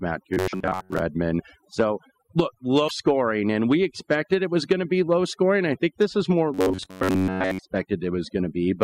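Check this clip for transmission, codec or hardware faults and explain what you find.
Three kinds of fault are audible: heavy noise reduction across the whole clip, two stretches of robotic buzzing, and two short codec glitches.

Overdone noise removal runs throughout. A noise reducer set far too aggressively shuts off individual frequency bands whenever they sit near its noise estimate, taking quiet parts of the speech with them. The background drops and breaks up into twinkling specks.

Robotic sound from repeated short buffers occurs from 0.34 to 1.02 s and from 6.54 to 7.59 s. Audio likely arrived too seldom, so playback kept repeating the last fragment instead of the skipped material. Most of each stretch is repeated, imposing a rigid 93.8 Hz metallic buzz, which fits a buffer of about 10.7 ms.

A broken MP3 bit reservoir shows at 0.52 to 0.54 s and 2.87 to 2.91 s. Frames were likely dropped, so the next frame borrowed reservoir bytes that belonged to a different frame. 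The audio jumps ahead with a brief chirp, noise burst or short hole, which fits 24 ms MP3 frames.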